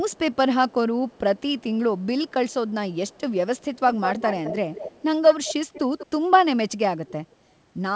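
A faint delayed copy of the speech trails it in this clip, barely audible at 0.11 to 0.36 s, 0.69 to 0.74 s, 1.09 to 1.63 s and 1.98 to 3.21 s, lagging by 232 ms. It turns much stronger at 3.57 to 6.07 s and is faint again at 7.06 to 7.13 s, in both now 191 ms behind. This is likely echo leak, a far-end loudspeaker feeding an imperfect echo canceller, with the whole clip band-limited to 8 kHz.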